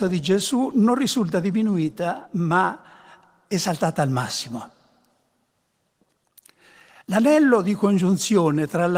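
Nothing in this speech recording is technically at fault, and the Opus voice compression it has passed through is working as intended, with the full audio band retained.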